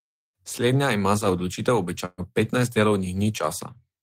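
Speech clip with a burst of packet loss from 2.05 to 2.21 s, just after "ima za odločitev": the last sound gets stretched and fades out for about 120 ms, then jumps ahead with that stretch missing.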